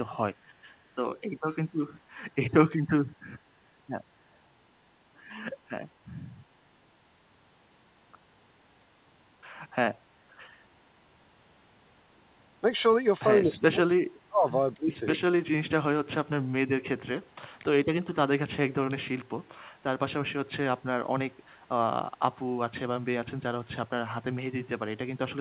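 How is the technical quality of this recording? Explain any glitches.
The recording is narrowband call audio with nothing above 4 kHz, which fits G.711 mu-law at 64 kbps. It carries two kinds of glitch.

Echo leak occurs at 2.43–2.65 s, 15.08–15.31 s, 17.26–17.63 s, 19.39–19.49 s, 20.45–21.6 s, 22.17–22.48 s and from 23.01 s to the end. The echo canceller likely missed part of a loudspeaker's pickup, so a copy of the sound returns 216 ms late. It is mostly faint, about 40 dB down, but stronger at 2.43 s (about 30 dB down) and strongest at 15.08 s (about 10 dB down).

Speech suppressed in double talk runs from 13.44 to 15.06 s. With both sides talking, the canceller likely couldn't separate talker from echo and ducked the speech by up to about 35 dB, for roughly a second in total.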